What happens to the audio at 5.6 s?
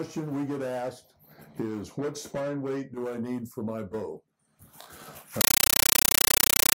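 From 5.41 s to the end, a compressed stream played as audio: undecoded frames, fitting an AC-3 stream, become loud 9.33 ms static bursts 31.25 times a second.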